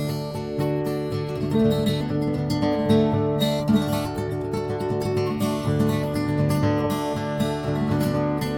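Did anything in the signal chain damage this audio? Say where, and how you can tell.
No, nothing in the signal chain damaged this music.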